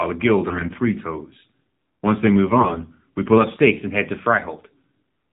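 Throughout, the speech carries the AMR narrowband mobile codec. Everything above 4 kHz is gone, and what remains is rebuilt from a vocal-tract model fed by sparse pulses, so the voice sounds plainly buzzy and synthetic. That fits a low mode around 7.4 kbps. A simple low-pass filter would only dull the sound. Here the voice itself is resynthesised, and that gives the processed, reedy character.

From 0.46 to 0.79 s, and again from 2.50 to 2.84 s just before "we pull", AMR bit errors strike. Each burst fits about sixteen damaged 20 ms frames, with a few percent of the weakly protected bits flipped, the first burst slightly worse than the second. The excitation pulses land in the wrong places and the fine gain and spectral values drift, so the voice turns hoarse, scratchy and gargly while keeping roughly its pitch and level. Lost frames would instead produce gaps, muting or repeated, smeared sound.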